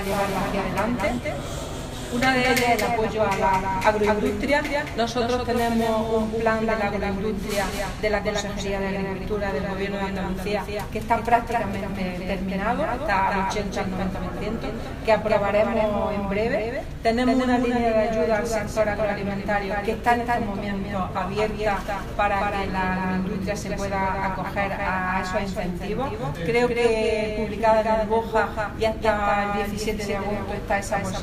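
A doubled audio track runs through the whole recording: a full-band copy trails the original by around 200 ms, about 5 dB quieter, with no decay or room colour. The likely cause is the signal being captured twice, once through a slower path.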